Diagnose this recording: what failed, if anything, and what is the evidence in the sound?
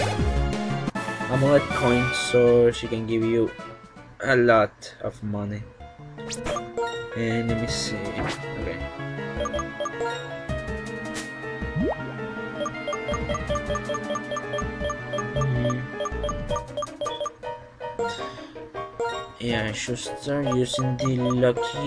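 Nothing failed here as far as I can hear; there's no point in the recording where any stage of the chain gives itself away, so there's no evidence of a fault to point to.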